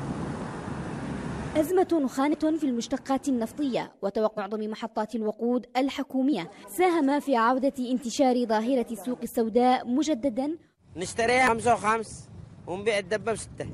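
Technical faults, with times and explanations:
2.32–2.34 s, 4.37 s, 6.32–6.34 s, 9.03 s and 11.47 s: damaged data in a compressed stream. Each is a short blip lasting about 20 ms or less, where corrupted bytes made the decoder misread a frame, lose sync and resume at the next valid frame header.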